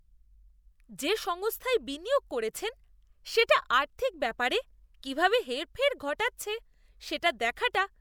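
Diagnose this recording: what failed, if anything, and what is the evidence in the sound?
Nothing has failed: at no stage between capture and playback does the speech signal show any audible fault.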